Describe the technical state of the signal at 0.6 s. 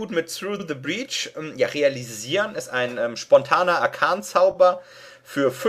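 At 0.6 s the signal has repeated frames, from 0.59 to 0.65 s. A 60 ms block of compressed audio was written or sent twice. The decoder plays that slice once, then plays it again. This points to a short run of coded frames being duplicated. The result is a brief stutter, and a click can appear at the joint where the repeat fails to match. The repeat adds 60 ms to the audio's length.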